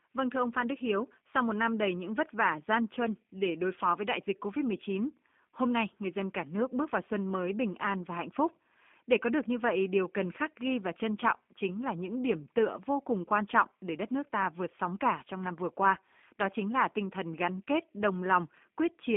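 G.729 codec damage runs from start to finish, and it is plainly audible. Nothing above about 3.5 kHz or below about 200 Hz survives, leaving a narrow telephone-line band. Within that band the speech has been rebuilt from a coarse model: a filter for the vocal tract, a pitch predictor and a handful of pulses per short frame. The result is intelligible but rough and faintly synthetic, which fits an 8 kbit/s G.729A stream.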